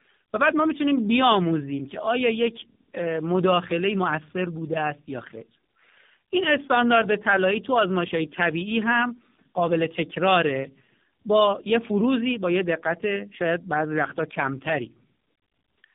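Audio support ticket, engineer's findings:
Tandem speech coding, whole clip. Rough, muffled, warbly, and nothing above 3.7 kHz. Looks like G.723.1 at 6.3 kbit/s, out to G.711 mu-law, then re-encoded AMR-NB 12.2 kbit/s. AMR is chewing on G.723.1's leftovers, so two speech coders' artefacts stack. Worth checking the transcoding points.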